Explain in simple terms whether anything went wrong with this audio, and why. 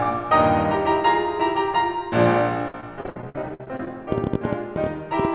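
Between 2.68 and 3.90 s, the call connection kept losing or delaying pieces of the music. This is repeated packet loss. The system patched each hole by stretching the last bit of sound, so about a third of that stretch sounds choppy and robotic, with gaps up to 59 ms.

From 4.12 s to the end, a train of clicks runs over the music, about ten per second at an uneven pace. It is likely caused by electrical interference or a faulty connection or power supply, and it sounds like erratic ticking.

The music also carries nothing above 4 kHz, which fits the narrowband telephone codec on this call path.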